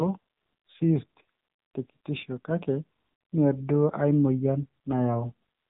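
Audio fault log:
Throughout, AMR narrowband mobile codec: the speech is band-limited with nothing above 3.8 kHz, leaving it thin and muffled. Heavy codec damage makes the speech buzzy and synthetic, which fits a low rate near 6.7 kbps, where pulse-excited vocal-tract modelling leaves little detail.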